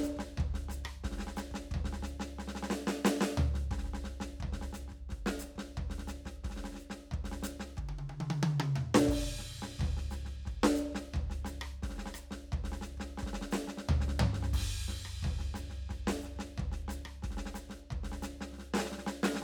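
Listening to this music clip, nothing technical stood out as wrong at any point.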